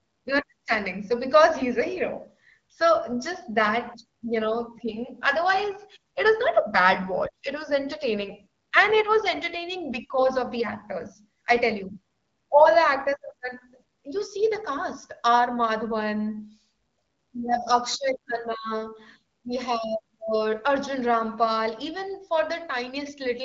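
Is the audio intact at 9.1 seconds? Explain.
Yes, the audio is intact at 9.1 seconds, with no dropout, glitch or other fault at that moment.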